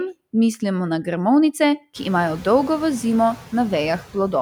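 Noise suppressor artifacts run through the whole clip, from start to finish. The suppressor judges, frame by frame, which frequency bands hold only steady background and pulls them down by about 13 dB, so the noise drops away in the gaps between words and swells back up underneath each phrase as speech opens the bands. The pumping is clearest after the room noise climbs by about 22 dB at around 2 s, settling about 19 dB below the speech.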